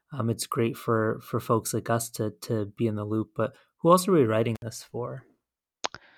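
At 4.55 s the speech drops out for about 63 ms, until 4.62 s, an intermittent contact fault: a loose cable or plug briefly breaks the signal path. Crackle marks both edges of the gap, and faint hiss fills the open line between them.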